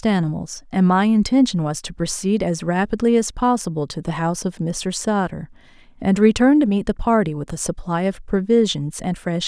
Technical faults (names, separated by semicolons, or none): none